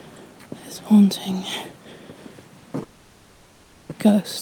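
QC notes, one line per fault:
2.83 to 3.93 s, long network dropout: the last sound is stretched into a fading buzz-like fill for about 1.1 s with no true silence, then audio resumes with roughly 0.7 s missing, likely because packets stopped arriving and playback jumped ahead, lengthening the delay by around 0.4 s.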